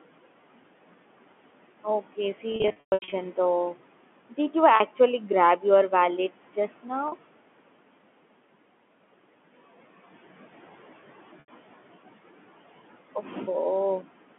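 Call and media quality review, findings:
Noise suppressor artifacts, whole clip: background pumps, dropping by about 17 dB in pauses and returning under speech. Suppressor gates per band and frame. Room noise sits about 18 dB below speech, heard through the 200 Hz–3.4 kHz G.711 line band.

Packet loss with pitch repetition at 2.52–3.12 s: about 400 ms lost, scattered over 600 ms, longest run 120 ms. Buzzy held tones fade to gaps. Jitter buffer/network; concealment repeats the last pitch period. The pattern fits 20 ms packets.

Further packet loss with pitch repetition: 40 ms at 4.76 s, 40 ms at 7.08 s right after "your wallets just", and 80 ms at 11.4 s. Short buzzy smears where the receiver repeats the last pitch cycle to bridge each gap.

Speech cut by the noise suppressor, 13.15–13.36 s: speech sounds swallowed and faint, dipping by up to about 8 dB over roughly 150 ms. The suppressor misclassified low-level speech as noise and attenuated it with the background.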